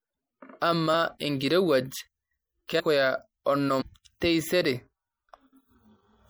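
The whole clip carries MP3 compression damage, plainly audible. Weak detail flickers in and out, giving a watery, swirly edge to the speech. This likely comes from a low-bitrate encode, fitting about 64 kbps.

Compressed frames are skipped three times. At 0.93 s, about 50 ms of audio vanishes. At 2.79 s, about half a second is lost. From 3.80 to 3.82 s, about 200 ms goes. Each jump fits whole 26.1 ms frames missing. The joins sound like brief smeared blips, not hard clicks.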